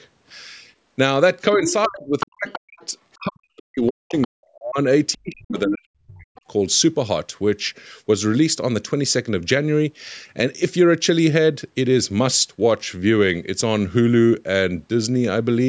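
This is a speech clip that has passed through call microphone processing, with nothing above 8 kHz. The other side's voice is leaking through at 1.54 to 1.88 s, 2.2 to 3.16 s and 3.87 to 4.27 s. It sits roughly 10 dB under the talker in the first two stretches and about 20 dB under in the third. The likely cause is a loudspeaker echo the canceller failed to fully remove. Speech is also suppressed in double talk from 1.56 to 4.78 s and from 5.13 to 6.44 s. The talker's level drops in pieces, by as much as about 40 dB. About two seconds are affected in the first span and about one second in the second. The likely cause is an echo canceller that could not separate the talker from the echo and turned both down.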